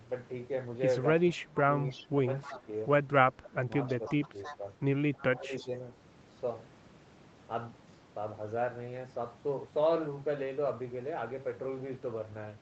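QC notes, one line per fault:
1.31–2.07 s, 2.42–2.68 s, 3.87–4.57 s, 5.15–5.68 s: echo leak. A faint delayed copy of the speech trails it by 315 ms, about 15 dB below the direct speech, and about 20 dB below in the last stretch. This is likely far-end loudspeaker pickup that the echo canceller did not fully remove and that was sent back.
1.34–2.67 s, 3.31–4.64 s, 5.33–5.71 s: speech suppressed in double talk. The speech dips in pieces, by roughly 25 dB at worst in the first window, around 20 dB in the second and around 15 dB in the third, over roughly 0.7 s, 0.7 s and 0.3 s. This is likely the canceller attenuating the talker along with the overlapping echo.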